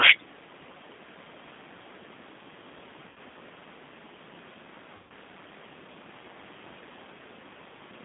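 G.729 codec, throughout: the speech is rebuilt at 8 kbit/s from a vocal tract filter and a few pulses per frame, confined to about 150 Hz to 3.6 kHz, and it sounds plainly rough and synthetic. VoIP packet loss concealed by the speech codec, at 3.09 to 3.18 s and 4.96 to 5.11 s: the decoder stretches its last frame into a fading buzzy tone or coloured noise through gaps of 70 ms and 140 ms, which fits seven and fourteen lost 10 ms frames.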